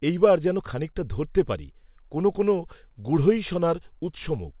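No technical faults are audible.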